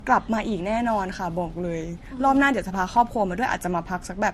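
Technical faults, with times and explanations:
Throughout: transcoding between lossy codecs. Nothing is present above 13.2 kHz, and two layers of coding artefact are heard together. The likely cause is a low-rate MP3 re-encoded to Vorbis, with the second codec spending bits on the first codec's artefacts and the lowest cut-off in the chain remaining.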